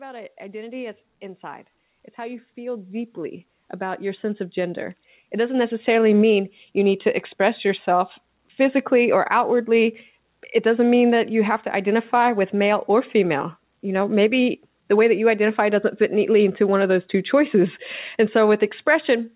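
From 0.05 to 1.51 s, automatic gain rising lifts the level by about 5 dB, then again from 2.15 to 5.99 s by about 14 dB, ending before "mean you need to". Voice and background swell together slowly, unlike compressor pumping, which ducks and recovers around loud syllables.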